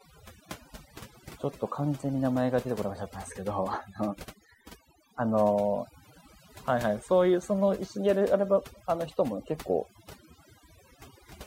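From start to finish, a noise reduction stage has been pushed too hard, producing overdone noise removal. It treats any frequency band that sits close to its noise estimate as disposable and pulls it far down or mutes it, so the softer components of the speech are stripped away along with the noise. The gaps between phrases collapse into near silence scattered with twinkling specks.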